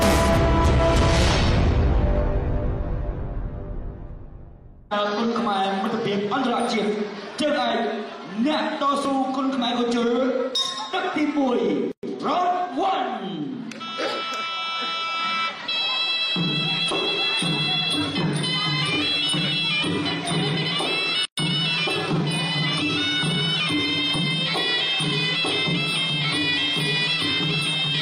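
Hard clipping runs through the whole clip. The signal is pushed about 7 dB past what the chain can pass, so roughly 2% of samples hit the ceiling and are sliced flat. On the waveform the loudest peaks appear as squared-off plateaus. On a spectrogram each clipped burst throws vertical smears of harmonics high into the spectrum. The result is a gritty crackle whenever the sound gets loud.

At 4.10, 9.05, 14.12, 19.08 and 24.16 s the audio skips forward. Roughly 40 ms vanishes each time and the two sides butt together with no silence. The roughly 5-second spacing points to audio missing between chunks, likely lost as one fixed-length block was closed and the next opened. The waveform shows a sudden discontinuity, sometimes a small step. The spectrogram shows a thin vertical line at the join and a slight jump in whatever was sustaining.

From 11.92 to 12.03 s, and again from 21.25 to 21.38 s, the sound drops into silence for 114 ms and then 123 ms before resuming where it left off. 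These are gaps at a join of encoded pieces: separately encoded segments were spliced with their start delay and final-frame padding left in. Both waveform and spectrogram show a clean blank slot with edges that are slightly softened rather than razor-sharp.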